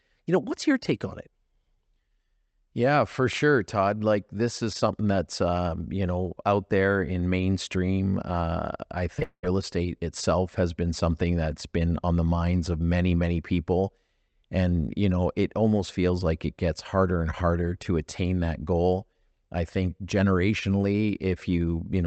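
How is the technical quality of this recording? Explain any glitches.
The recording has one rough patch, a pair of glitches back to back just after 9 seconds. The top end cuts off around 8 kHz, which fits a call codec like Opus.

Short concealed packet loss, 9.19 to 9.23 s: a few hundredths of a second never reached the decoder in time, so the receiver stretched the last bit of sound to cover it. You hear it as a quick smear or wobble right before the bigger gap.

Long network dropout, 9.23 to 9.45 s: the sound carries on as a fading buzz or hiss over roughly two tenths of a second, ending in about 70 ms of silence before the speech picks up again with a chunk missing. The likely cause is a stretch where no packets arrived at all, with the receiver filling what it could before giving up.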